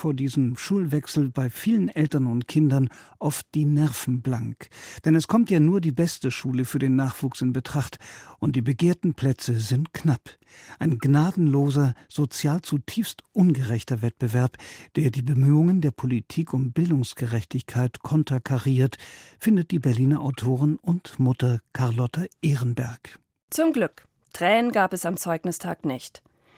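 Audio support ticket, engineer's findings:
No faults found; speech passes through the Opus voice path in hybrid mode at 20 kbps, fullband, with only light coding texture audible.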